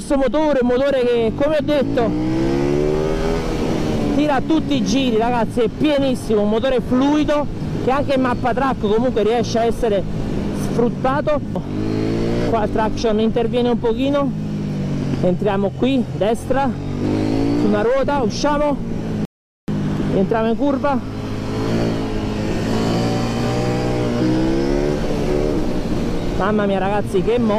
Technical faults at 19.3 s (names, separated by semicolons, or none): rebuffering stall